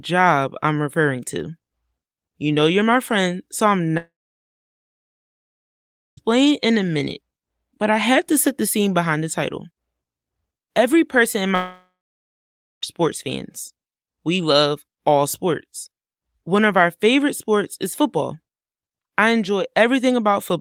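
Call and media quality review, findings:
Speech cut off at 3.97 s and 11.55 s, last sound smeared into a brief fading buzz, then dead silence (about 2.1 s and 0.9 s). Resumes 6.19 s and 12.84 s, skipping ahead. Long network dropout, likely packet loss; receiver concealment decays, roughly 2.2 s and 1.3 s lost.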